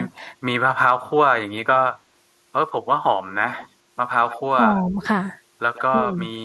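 From 0.15 to 0.28 s, and again from 4.85 to 4.99 s, the speech dips by roughly 5 dB. This is speech suppressed in double talk, likely an echo canceller turning down the near talker while the far side speaks. It appears as brief shallow troughs in the waveform envelope.

Echo leak appears at 3.52 to 3.68 s, 4.29 to 4.41 s, 4.7 to 4.82 s and 5.74 to 5.82 s. A faint copy of the speech returns 134 ms late, about 20 dB down (about 15 dB at 4.29 s), likely loudspeaker pickup the canceller missed. On a spectrogram these are weak, delayed repeats of the preceding formant patterns.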